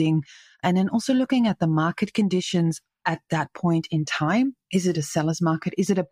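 Listening to the speech recording, nothing technically wrong stood out.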